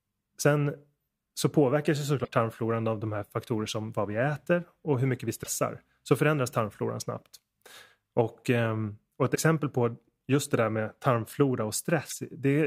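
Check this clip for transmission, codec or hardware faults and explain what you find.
Four short glitches break into the speech, all of the same kind. At 2.24 to 2.28 s, between "så påverkas ju" and "tarmfloran av de här"; at 5.42 to 5.47 s, after "och hur mycket vi"; at 9.34 to 9.37 s, between "ehm och ett" and "på just det där"; and at 12.08 to 12.13 s, the audio skips forward and a brief glitch about 30 to 45 ms long replaces it. This is likely a broken MP3 bit reservoir. When frames drop out, the following frame reaches back for borrowed data and decodes bytes belonging to another frame, garbling the first frame or two after each cut. The glitch spans roughly one or two frames, which fits 26 ms MP3 frames.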